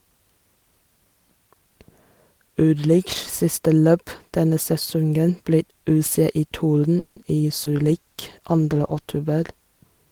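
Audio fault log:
6.99 to 7.19 s, call audio freeze: the sound stalls and the last moment is stretched into a short fading buzz lasting about 170 ms. It never drops to silence, and the audio then resumes where it left off, with nothing skipped. This is likely a delivery stall in which packets arrived late and the jitter buffer ran dry. The receiver held the last sound to cover the wait, so everything after this point runs about 170 ms later.
7.59 to 9.10 s, call bitrate drop: the sound turns grainy and watery, with less crispness at the top end, for about a second and a half before clarity returns. The call's bandwidth estimate fell and the encoder was pushed from 32 kbps down to 18 kbps. It held that lower rate for 1.44 s. With fewer bits, Opus codes the signal more coarsely and trims high frequencies, which gives the roughened, duller texture.
7.64 to 7.83 s, short concealed packet loss: inside the low-bitrate stretch there is a brief smeared wobble. 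About 40 ms of audio never reached the decoder in time. Roughly 10 ms of that was bridged by continuing the previous sound before blending back into real audio. The timeline also shifts by a few hundredths of a second here, pulling the following audio slightly earlier.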